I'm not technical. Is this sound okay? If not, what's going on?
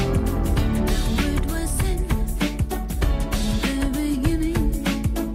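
No. A steady low hum runs underneath the whole clip, from start to finish, and it is fairly loud compared with the sound itself. This is mains hum: electricity from the power supply leaking into the recording, often through a ground loop or a nearby transformer. It sits at 50 Hz, the mains frequency. Unlike wind or handling rumble, which rises and falls, this hum holds one unchanging pitch the entire time.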